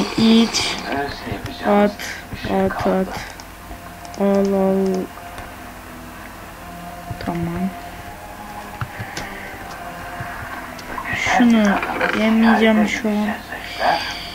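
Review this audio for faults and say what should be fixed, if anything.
No faults were heard, so nothing needs fixing.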